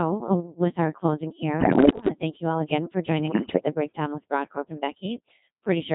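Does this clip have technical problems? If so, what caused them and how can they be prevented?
Yes. Codec 2 vocoder runs throughout: at 2.4 kbit/s only pitch, voicing, energy and spectral envelope survive, so the speech is resynthesised from sine waves and sounds heavily robotic and buzzy. Use a higher-rate waveform codec wherever the channel allows.

Bit errors on digital voice radio occur at 1.60 to 2.08 s, after "with our closing" and before "to thank you all", and at 3.28 to 3.66 s, after "you all again for". Around one bit in ten was corrupted, and each flipped bit misdirects a whole frame's pitch, level or spectrum, producing warbling, bleeping gibberish. Stronger signal coverage and forward error correction prevent this.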